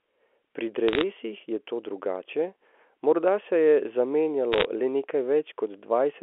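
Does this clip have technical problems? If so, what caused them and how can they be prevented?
Yes. Bit errors on a digital phone line crackle at 0.88–1.03 s, just before "je to drugače morda", and again at 4.52–4.65 s. Flipped bits in the G.711 stream corrupt single samples, and hits on sign or high bits become sharp ticks, suggesting an error rate under one percent. Error correction or a cleaner transmission link would prevent them.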